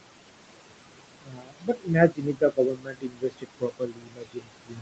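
Noise suppressor artifacts run through the whole clip: steady background is pulled down by about 21 dB frame by frame, so the noise sinks between the words and rises under them. Speech cut by the noise suppressor occurs from 1.21 to 1.91 s and again from 2.09 s to the end. The suppressor misreads speech as noise and drops it by up to about 22 dB, so soft consonants and endings sound swallowed.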